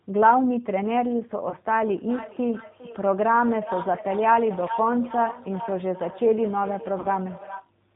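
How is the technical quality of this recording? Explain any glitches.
The recording has poor technical quality, with three separate problems.

Throughout, the speech passes through the G.729 codec, which rebuilds the voice from a vocal-tract filter, a pitch predictor and a few pulses per frame, discarding everything above 4 kHz. The result sounds plainly rough, muffled and somewhat synthetic, consistent with 8 kbit/s G.729.

At 1.50 to 1.56 s and again at 7.00 to 7.07 s there is VoIP packet loss concealed by the speech codec. About 20 ms and 40 ms of audio went missing, which fits two and four lost frames. The decoder extended its last pitch and filter at falling gain, so each gap becomes a brief, fading smear of stretched sound, and the voice stays weakened for a moment afterwards.

From 1.87 s to 7.71 s there is feedback echo between two devices. A second device on the same call in the room replays this microphone's signal, and that microphone picks it up again. 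The speech returns roughly every 0.4 s, at most about 12 dB below the direct voice, thinner and more ringing with each pass.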